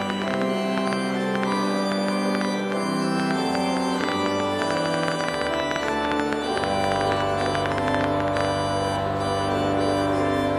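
From 0.02 s to 8.46 s a train of clicks runs at nearly 9 per second, around seventy in all, unevenly spaced and peaking some 20 dB above the audio. Unlike random crackle, the pops share one shape and tick through pauses too, likely from electrical interference.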